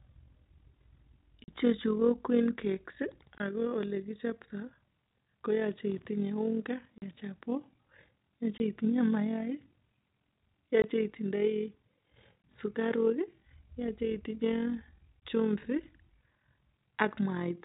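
Overlap-add ripple runs through the whole clip. The frames were rejoined with an overlap that does not sum to a steady gain. So the level swells and dips by about 6 dB, around 40 times a second. It sounds like a rough flutter over the speech.

Packet loss filled with silence follows, at 1.44 to 1.48 s, 3.38 to 3.40 s, 6.98 to 7.02 s, 8.58 s, 10.82 to 10.84 s, 12.44 s and 15.20 s. Each time, chunks of audio vanish and hard silence replaces them. The longer gaps last 40 ms, which fits two lost 20 ms packets. Each hole has sharp edges. Throughout, the telephone-band G.711 coding cuts off everything above 4 kHz.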